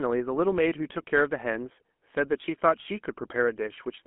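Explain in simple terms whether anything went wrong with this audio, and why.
Yes. The whole recording has passed through the GSM full-rate codec, the original mobile-phone speech coder. It rebuilds speech from a simplified model of the throat and mouth driven by sparse pulses, giving plainly audible buzzy, gravelly roughness and a muffled sound with nothing above 3.8 kHz.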